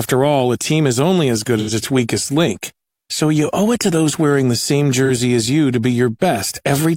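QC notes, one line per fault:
1.59–1.71 s and 5.05–5.11 s, AAC frame loss with concealment: two brief smeared, noisy patches. The first comes after "is only as good" and before "its weakest link so". The second comes after "those wearing the same" and before "as you to be". The decoder lost data and filled each gap by re-using the last good spectrum. The first gap is about 85 ms, which fits two lost frames. The second is about 43 ms, which fits one. Both are too short to fade to silence.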